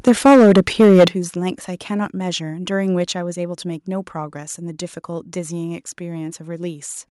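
From 0.07 s to 1.08 s the speech shows microphone overload: the peaks run about 8 dB past the converter's ceiling and are flattened, with something like 15 percent of the samples cut off at the limit. The loudest syllables take on a harsh, crackling edge as their waveform tops are cut. The cause is likely an input volume set too high for the microphone.

The microphone volume stepped down three times, the first two while this was happening. At 0.08 s the level falls by about 3 dB, most likely the call software reacting to the first clipped peaks by lowering the device's input. It is not enough. At 1.08 s, just as the distortion ends, the speech and background drop together by about 10 dB, an abrupt step. A final trim of about 1 dB follows at 2.10 s.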